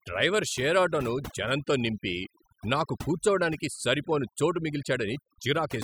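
Overdone noise removal runs the whole way through: the denoiser is clamping bands near its noise estimate, so the background sparkles in near-silence.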